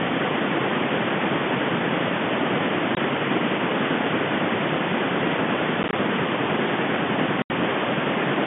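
From the start and through the whole recording runs an echo with no canceller. The far end's loudspeaker feeds its microphone, returning the speech about a third of a second later and about 14 dB down, a thinner shadow. A spectrogram shows faint, delayed duplicates of each harmonic pattern.

Packet loss filled with silence breaks the sound three times: from 2.95 to 2.97 s (20 ms), across 5.83 to 5.93 s (40 ms lost in gaps no longer than 20 ms), and from 7.42 to 7.50 s (80 ms). The hole lengths fit 10 ms packets. Each gap is a hard-edged flat line in the waveform and a blank vertical slot in the spectrogram. The G.711 telephone band of roughly 150 Hz to 3.5 kHz frames all of it.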